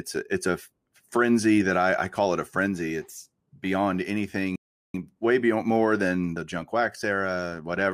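Speech that cuts to silence at 4.56 s for about 0.38 s, resuming at "way beyond more than": a playback stall, likely the player starving for data or its thread being blocked.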